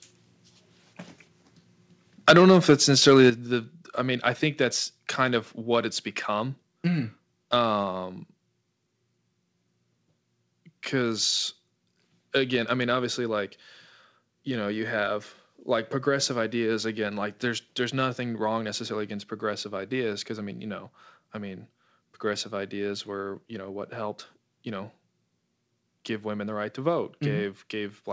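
Microphone overload is heard in this speech recording from 2.27 to 2.74 s and again from 3.02 to 3.29 s. The loudest peaks are flattened with a harsh, crackling edge. The input likely ran about 11 dB and then about 6 dB past the converter's ceiling, squaring off a few percent of the waveform. A microphone volume stepped down accompanies each burst: at 2.31 s the level drops abruptly by about 3 dB, and at 3.3 s, just before "the the I mean", it falls by about 8 dB, consistent with call software cutting the device's input gain in single steps after detecting the clipping. Throughout, the audio carries nothing above 8 kHz, which fits a G.722 call path.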